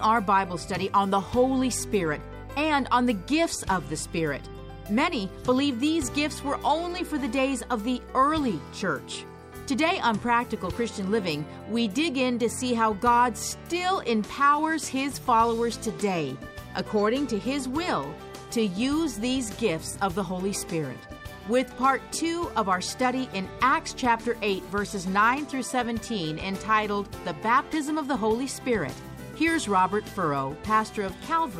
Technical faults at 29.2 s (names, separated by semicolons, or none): none